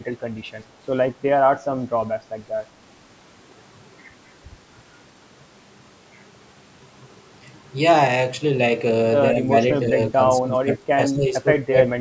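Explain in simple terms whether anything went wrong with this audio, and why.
Yes, something went wrong near the end. The speech dips in level at 9.34 to 9.51 s, 9.9 to 9.98 s, 10.15 to 10.19 s, 10.39 to 11.36 s and 11.64 to 11.77 s. The first two dips are slight. The later ones are much deeper, and the longest lasts most of a second. This is likely speech suppressed in double talk. The call's echo canceller mistook the talker for loudspeaker echo while the other side was speaking, and turned both down.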